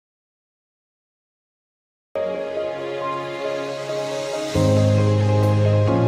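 From the start to 2.16 s the clip is dead silent, with no room tone at all: an audio dropout to silence already under way when it begins. The input was likely lost, with the recorder writing silence until the sound abruptly returns mid-flow.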